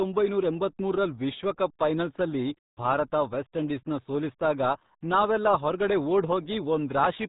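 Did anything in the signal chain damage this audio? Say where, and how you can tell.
Yes, at the codec: a RealAudio 14.4 encode, which fits an 8 kbit/s stream, strips everything above 3.8 kHz throughout, leaving the speech muffled and gargly.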